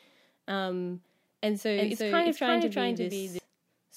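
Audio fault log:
1.77–3.39 s doubled audio track. A dry copy, about as loud, trails roughly 400 ms behind and cuts in and out abruptly. Likely a second, slower capture path.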